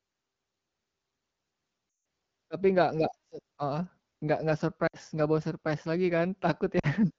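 Lost AMR speech frames hit at 1.89–2.05 s, 4.87–4.96 s and 6.79–6.87 s. Corrupted frames forced the wideband decoder to repeat earlier pitch and vocal-tract settings at falling gain. The speech smears and fades, worst in the 160 ms gap. On a spectrogram, the frozen harmonics dim. The waveform's envelope tapers toward silence before speech resumes.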